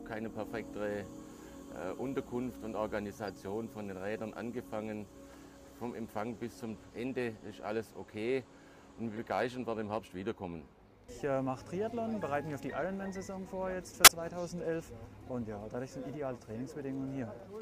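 At 9.17 to 9.19 s a short, fairly quiet blip appears, followed at 14.04 to 14.10 s by a louder burst lasting about 60 ms. Both are corrupt frames decoded: damaged bits in a few compressed frames, then a couple more, were played through rather than concealed. The misread gains and codes put energy at the wrong frequencies for the span of those frames, giving a brief chirp or noisy squeak with no link to the surrounding sound.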